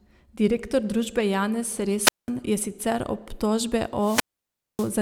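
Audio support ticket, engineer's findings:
Wireless mic squelch dropout, 2.01–2.30 s, right before "je sicer obtožbe". Quick hiss swell, then roughly 196 ms of near silence before the speech comes back. RF fading on the analogue FM link, so the receiver's squelch gated the output.

Same fault again, 3.98–4.94 s, just after "je sicer obtožbe". Longer hole, about 590 ms muted. Signal sagged below the squelch threshold for longer. Worth checking the transmitter battery, antenna placement and line of sight.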